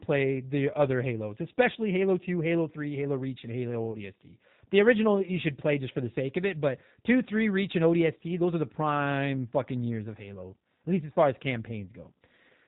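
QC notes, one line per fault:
throughout: G.729 codec. Rough, slightly synthetic speech, consistent with 8 kbit/s; the spectrogram shows a hard ceiling at 4 kHz with nothing above it.
3.92–3.97 s: VoIP packet loss concealed by the speech codec. About 20 ms was rebuilt from the preceding pitch and filter, fitting one lost packet, then decayed. On the waveform this appears as a smoothed, fading stretch.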